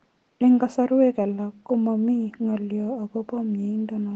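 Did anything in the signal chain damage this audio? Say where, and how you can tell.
No, nothing in the chain damaged this speech.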